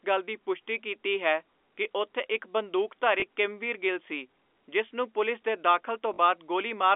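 At 3.20–3.22 s and 6.14–6.18 s there is packet loss with the last packet repeated. The gaps, 20 and 40 ms, fit one and two lost 20 ms packets refilled by replaying the previous one. The longer repeat buzzes briefly at 50 Hz, a robotic stutter in the band-limited telephone audio.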